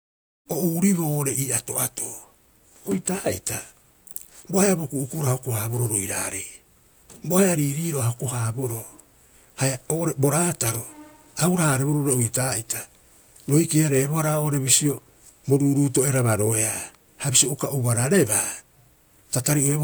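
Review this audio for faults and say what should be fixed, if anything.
Nothing here needs fixing. The speech opens with a smooth fade-in over roughly the first half second, complete by 0.49 s, with no click or hard edge.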